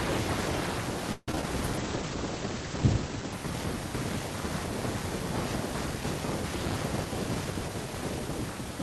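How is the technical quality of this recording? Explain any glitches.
The recording has three distinct glitches, all typical of audio sent over a live call connection.

From 1.12 to 1.43 s the speech turns choppy, with small pieces dropping out. This is repeated packet loss, the robotic-sound kind. Several packets went missing in quick succession, the longest gap about 152 ms. The receiver filled each hole by stretching the preceding sound, so roughly 61% of that stretch is synthetic continuation.

From 1.78 to 3.39 s the speech becomes muffled and watery. This is a call bitrate drop. The connection's bandwidth estimate fell, and the coarser coding points to the rate sliding from around 48 kbps to about 14 kbps, where it stayed for roughly 1.55 s. At that rate the encoder also narrowed the audio band, so the top end cuts off at 8 kHz instead of 20 kHz.

From 6.97 to 8.28 s the speech sounds rushed, though the pitch stays natural. 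This is a jitter buffer speed-up. Delayed packets piled up in the buffer, so the receiver trimmed many tiny pitch-period slices to catch up. Roughly 150 ms was removed in total, and playback ran at about 111% speed.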